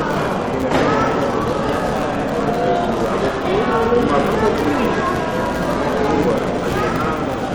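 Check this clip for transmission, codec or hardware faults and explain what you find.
There is one fault, present throughout: a filter restarted on every block. The filter loses its memory at each block boundary and starts from silence, so every block opens with a small transient. These repeat as a buzz at about 188 Hz, which fits a 256-sample block. Unlike mains hum, the buzz rises and falls with the sound's level and vanishes in quiet passages, because the transients scale with the signal.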